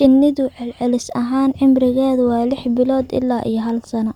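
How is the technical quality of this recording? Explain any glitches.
Listening to the recording, nothing stood out as a glitch or technical problem.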